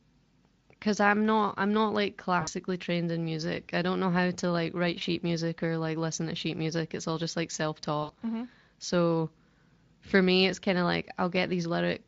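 Speech, carried over a Speex link whose coding is light, breaks up three times with VoIP packet loss concealed by the speech codec: 2.41–2.49 s, 4.99–5.03 s and 8.03–8.12 s. The first and last gaps fit about 60 ms of missing audio each (three 20 ms frames), the middle one a single frame. In each, the decoder keeps extending its last pitch and spectral shape at falling gain, so the voice smears into a fading buzzy tone or coloured noise. On a spectrogram this shows as flat, repeated bands that dim, and in the waveform as a decaying, overly regular stretch.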